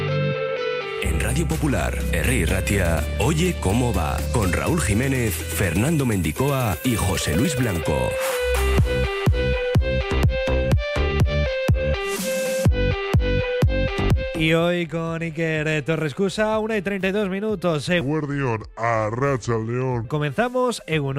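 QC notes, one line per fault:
18.01–20.05 s, section at the wrong speed: plays at about 0.74x, so it drags and drops roughly five semitones, likely a clock or sample-rate mismatch in that stretch.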